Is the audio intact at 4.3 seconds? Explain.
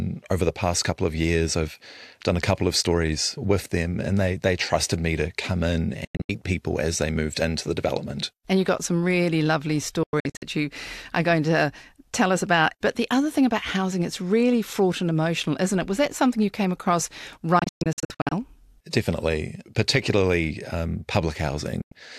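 Yes, the audio is intact at 4.3 seconds: the speech there carries through without any dropout, click, distortion or other break.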